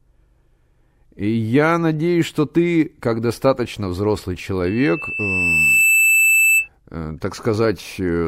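At 4.66 s a loudspeaker feedback squeal begins in the speech and runs until 6.68 s. A microphone is picking up the loudspeaker it drives, and around 2.6 kHz the loop gain has passed unity, so that single frequency keeps reinforcing itself. The tone swells over roughly a second into a sustained, piercing whistle that ends up noticeably louder than the speech, around 5 dB above it, before it cuts off.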